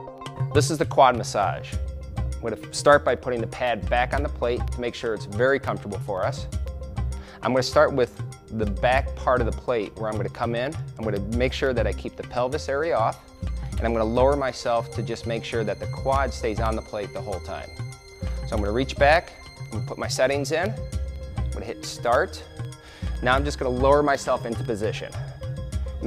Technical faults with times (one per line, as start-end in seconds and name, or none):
0.18-25.65 periodic USB or driver dropouts